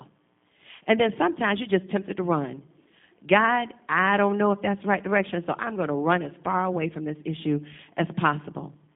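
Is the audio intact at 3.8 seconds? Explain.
No. At 3.8 s, as throughout the clip, the speech carries G.729 codec damage: rebuilt from a vocal tract filter and sparse pulses, consistent with 8 kbit/s, it sounds rough and synthetic. A spectrogram shows a 150 Hz to 3.6 kHz band, empty above 3.7 kHz.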